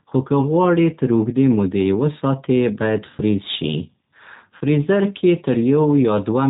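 Throughout, the speech passes through a G.729 codec, with the narrow band and coarse pulse-coded excitation fitting an 8 kbit/s G.729A coder. It rebuilds the sound from a vocal tract model and a few pulses per frame, so nothing above 4 kHz survives, and the speech is plainly rough and synthetic.

From 4.57 to 4.63 s, VoIP packet loss concealed by the speech codec occurs. About 40 ms of audio goes missing, which fits two lost packets, and the decoder fills the gap by extending its last pitch and filter at falling gain. The sound smears into a brief fading buzz or coloured noise, then stays weak or distorted for a moment after the stream returns.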